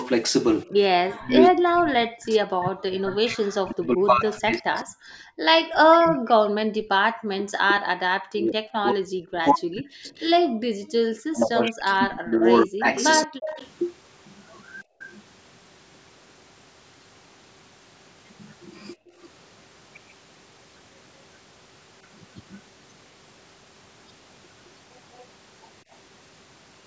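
Speech recorded through call microphone processing, with the band ending at 8 kHz. From 0.69 to 10.14 s and again from 11.31 to 13.44 s the voice dips and breaks into pieces, by up to roughly 40 dB, which is likely speech suppressed in double talk. The waveform shows ragged gaps, and the spectrogram shows harmonics and upper bands vanishing in patches. At 10.18 to 10.26 s and again at 12.96 to 13.68 s a delayed copy follows the voice, lagging 181 ms and then 188 ms, at roughly 25 dB and then 15 dB below the speech. This is likely echo leak, and it appears on the spectrogram as duplicated harmonic traces offset in time. The background gated by the echo canceller drops out at 10.46 to 11.03 s (about 40 dB), 14.84 to 15.0 s (about 25 dB) and 18.96 to 19.2 s (about 26 dB). These show as sudden dark, empty holes in the noise floor that refill once the canceller releases.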